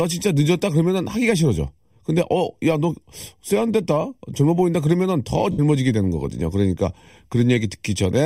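Speech throughout carries channel delay (comb filtering): one channel trails the other by roughly 0.4 ms, and summing them to mono cancels shared content at evenly spaced frequencies, starting near 1.5 kHz. The result is a steady hollow, phasey coloration across the whole clip. From 5.52 to 5.59 s, lost LE Audio frames leave a 67.5 ms gap, which fits a run of nine 7.5 ms LC3 frames. The decoder concealed it by repeating the last spectrum with randomised signs and fading it, so the speech briefly smears into a noisy, decaying wash before normal sound returns.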